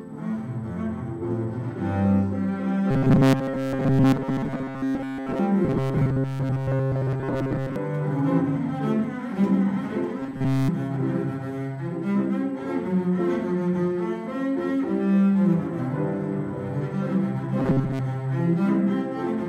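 From 2.91 to 5.39 s, 5.65 to 7.76 s, 10.20 to 10.69 s and 17.60 to 18.05 s, the audio becomes a metallic 134 Hz buzz. This robotic sound likely comes from repeated 7.5 ms buffers, which fill most of each stretch and all of the third.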